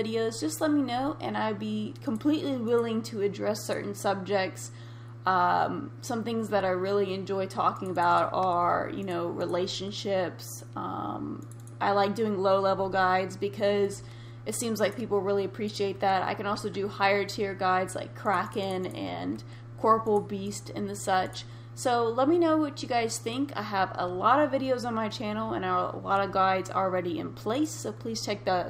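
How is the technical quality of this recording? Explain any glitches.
The recording carries one persistent fault, sample clock jitter, present from start to finish. The converter's clock wanders by around a microsecond, so each sample is taken slightly off time; the error tracks waveform slope, giving a hiss roughly 45 dB below the signal that swells on loud, bright passages. Unlike a steady noise floor, it disappears completely in silence.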